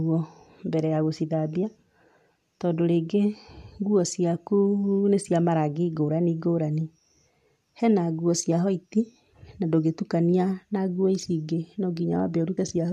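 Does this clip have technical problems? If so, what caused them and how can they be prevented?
Yes, there are compressed frames skipped at 12.56 s. About one frame goes missing or gets rejected by the decoder, so the speech jumps ahead by a few tens of milliseconds, which fits a frame of around 23 ms. To prevent it, check file integrity after transfer and keep the encoded stream free of truncation or corruption.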